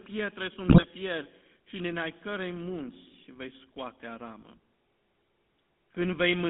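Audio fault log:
throughout: GSM full-rate codec. The band runs only from about 150 Hz to 3.5 kHz, with a plainly audible buzzy, gravelly roughness. The coarse pulse excitation, consistent with a 13 kbps full-rate coder, causes this grit, which sets it apart from the smoother muffling of ordinary telephone band-limiting.
0.68–0.85 s: GSM bit errors. Just before "fier și din ai", the audio briefly breaks into squawks and gargling. Corrupted filter, pitch and gain values warp the spectrum and jolt the level frame by frame, which fits about eight damaged frames, unlike the clean silence of packet loss.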